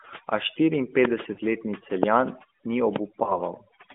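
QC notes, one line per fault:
Throughout: overdone noise removal. The noise reducer was pushed so hard that it shuts down individual frequency bands whenever they sit close to what it thinks the noise floor is. The background drops and breaks up into little twinkly specks, and the softer parts of the speech get pulled down along with the noise. This is all on top of a narrowband phone line that only carries roughly 200 Hz to 3.6 kHz.
1.34–1.41 s and 3.24–3.41 s: lost AMR speech frames. At 1.34 s two frames in a row, about 40 ms, go missing. At 3.24 s a single 20 ms frame drops. Each time the decoder fills the gap by reusing the last good pitch and vocal-tract settings at falling gain. You hear the sound smear and sag briefly instead of cutting out cleanly, and the speech comes back weak or rough for a moment afterwards.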